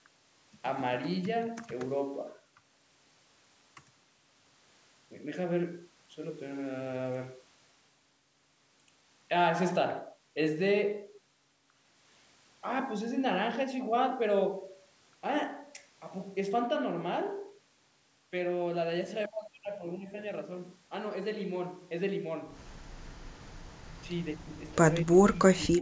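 From 25.02 s to the end at 25.82 s, the speech dips and breaks up, falling around 25 dB for roughly half a second: speech suppressed in double talk, likely an echo canceller turning down the talker during far-end sound. The waveform shows gaps; the spectrogram, faded patches.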